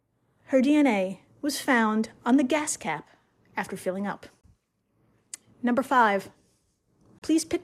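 Gap at a join of encoded pieces, at 4.41 s (about 26 ms) and 7.19 s (about 34 ms): separately encoded segments were spliced untrimmed, so encoder delay and padding leave brief holes in the speech.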